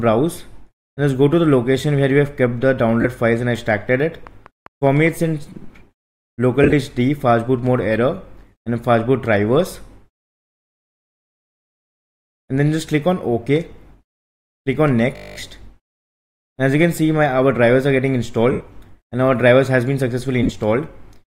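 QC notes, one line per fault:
3.01 s, 6.63–6.73 s, 18.52–18.61 s, 20.43–20.50 s: lost LE Audio frames. Between 30 and 83 ms goes missing each time. The decoder refills each gap by reusing the last spectrum with random signs, so the sound turns into a short noisy smear.
15.16–15.36 s: system hang loop. The system froze while the audio hardware kept replaying its buffer. The same 20 ms slice repeats ten times, heard as a steady 50 Hz buzz.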